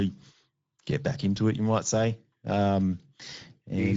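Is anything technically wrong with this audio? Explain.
Yes, the speech has plainly audible Speex codec damage, and it runs the whole way through. Speex is a CELP coder that squeezes each frame into a small set of filter and excitation parameters, so the voice comes out noisy and hoarse. Nothing survives above about 7.7 kHz, and the band above 4 kHz sounds like shaped, noise-like fill rather than real detail. That all fits a middle quality setting, somewhere around 16.8 kbps.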